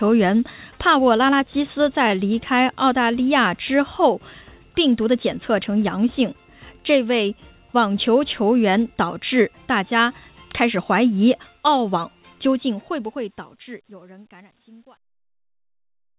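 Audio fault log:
12.35–16.18 s: truncation distortion on a fade. As the fade-out from around 12.35 s nears the smallest step, the undithered gain stage (fitting an 11-bit word) squares the waveform into coarse steps. From 14.26 s, the tail turns gritty.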